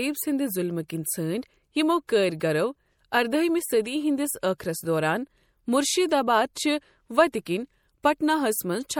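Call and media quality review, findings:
MP3 compression across the whole speech clip, likely from a low-rate lossy encode; the damage is plainly audible and fits roughly 64 kbps. Encoder short of bits, weak frequency lines dropped and restored frame to frame. Result: watery, swirly texture, metallic edge on s sounds, smeared consonant onsets. Band-limit at 19.7 kHz, nothing above.

Pre-echo at 0.88, 2.07, 2.40, 7.32 and 8.03 s. Transform block spreads quantisation noise sized for a sharp attack into the quiet just before it. Short hiss 11 to 17 ms ahead of each onset; attacks soft and blurred rather than crisp. Same codec path as the compression damage above.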